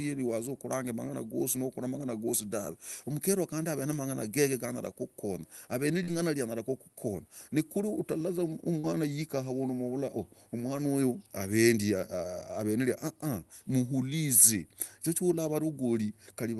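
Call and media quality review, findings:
Short concealed packet loss, two events. Brief smear in the speech at 6.03–6.10 s and again at 8.79–8.87 s. About 40 ms missing each time. Probable component: jitter buffer and decoder concealment on the call path. Mechanism: packets arrived too late, and the decoder extended the preceding sound to bridge each gap, then crossfaded back into the real signal. A short consonant inside either gap may be lost. The call codec's content tops out near 12 kHz, consistent with Opus at a moderate bitrate.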